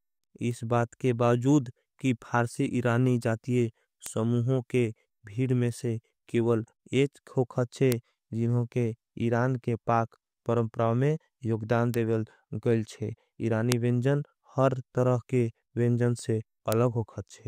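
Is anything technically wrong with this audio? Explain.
Yes. The speech carries bit error spikes, sharp broadband ticks at 0.51 s, 4.06 s, 7.92 s (just before "जिन्हों के"), 11.94 s, 13.72 s (after "गईल छे") and 16.72 s (after "तरह के विंजन से"). Each is a flipped bit that throws one sample, or three at 13.72 s, by a power of two and back, peaking from about −25 to about −1 dBFS, unrelated to the speech.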